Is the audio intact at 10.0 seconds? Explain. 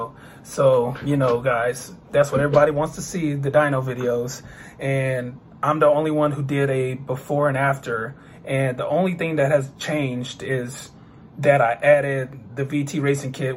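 Yes, at 10.0 seconds the audio plays through cleanly, with no dropout, click, distortion or other fault at that point.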